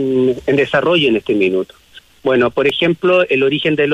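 At 2.70 s a block of digital silence, about 1.3 ms long and consistent with a 64-sample buffer left unfilled, cuts the audio out abruptly, heard as a single tick.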